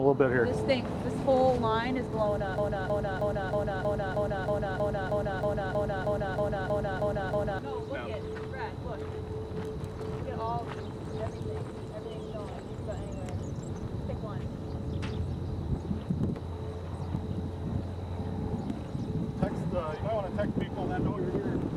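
From 2.58 s to 7.59 s the audio gets stuck in a broken-record loop: a chunk of about 0.32 s repeats exactly, back to back, 16 times, so you hear the same fragment stutter for about five seconds. Whatever should have played during that stretch is simply gone. The likely cause is a stall in the player, encoder or stream, which kept resending the last fragment it had buffered until things got moving again.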